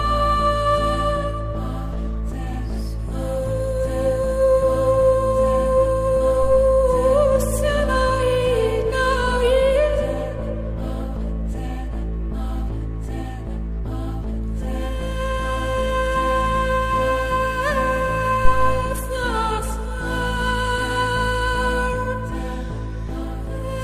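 Two phantom power thumps interrupt the audio, at 6.42 to 6.62 s and 18.45 to 18.92 s. Supply switching on the live input sends a deep pulse, peaking about -15 and -3 dBFS.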